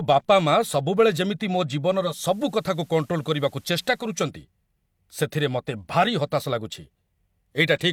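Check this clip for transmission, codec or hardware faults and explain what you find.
One fault, at 1.85 to 4.31 s, just after "ଯେମିତି ମୋ": digital radio blending to analogue. The receiver lost the digital signal and cross-faded to FM over 445 ms. Hiss appears roughly 35 dB down, and the level stays the same.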